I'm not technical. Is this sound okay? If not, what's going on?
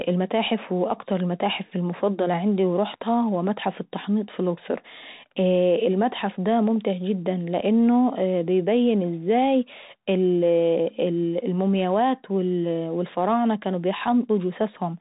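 No, not quite. The whole clip, start to finish, has gone through a Bluetooth CVSD headset codec, the basic format cheap headsets use for calls. It records the sound in very rough little up-or-down steps and throws away everything above about 3.8 kHz, so the speech sounds muffled and phone-like. S sounds come out scratchy, louder bright bits smear and distort, and there's a grainy hiss running underneath.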